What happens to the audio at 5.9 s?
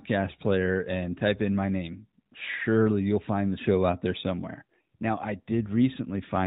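Nothing goes wrong at 5.9 s: the speech there continues intact, with only the narrowband, telephone-like quality of the AMR narrowband mobile codec at 12.2 kbps that carries the whole clip.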